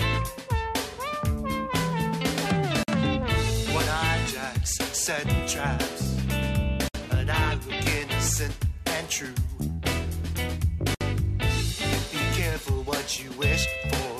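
Gaps at a join of encoded pieces fall at 2.83, 6.88 and 10.95 s, every 4 s and 50 to 64 ms long: separately encoded segments kept their padding, leaving blank vertical stripes and flat waveform runs with smeared edges.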